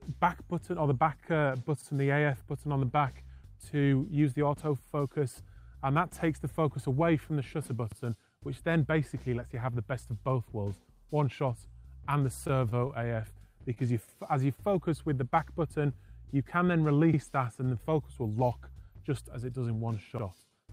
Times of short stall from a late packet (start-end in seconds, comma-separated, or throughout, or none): 12.47-13.05